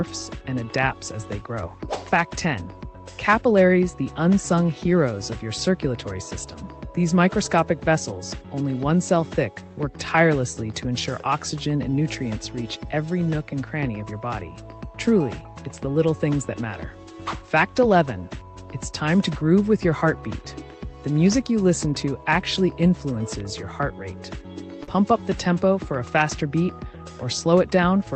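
Short concealed packet loss occurs at 24.83 s, lasting until 24.89 s. About 40 ms of audio failed to reach the decoder in time, and the receiver covered the gap by extending the preceding sound for roughly 33 ms before blending back into the real signal. The result is a brief smeared patch where the audio briefly holds on to what came just before, then rejoins the true signal.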